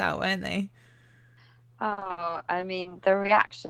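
From 1.89 s to the end at 3.69 s, the speech suffers repeated packet loss, giving a robotic sound. Audio keeps going missing, and each hole is patched by stretching the preceding sound. Gaps, up to 60 ms, arrive in quick succession. The result is choppy, with pieces missing.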